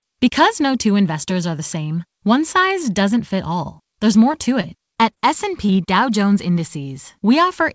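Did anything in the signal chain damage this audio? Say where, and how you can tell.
Yes. Repeated packet loss (robotic sound), 4.32 to 5.18 s: the network stage dropped or delayed audio in six gaps, the longest gap about 23 ms. Each hole was patched by extending the preceding sound, so about 12% of that stretch is synthetic, which gives the choppy quality.

Short concealed packet loss, 5.66 to 5.70 s: about 20 ms of the call arrived too late to decode. The receiver bridged the hole by continuing the last sound and blending back in, which is heard as a brief smear, on top of the G.722 path's band limit at 8 kHz.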